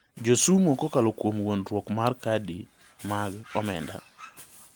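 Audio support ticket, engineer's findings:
Listened through the whole speech recording and found nothing to flag, so no findings for this ticket.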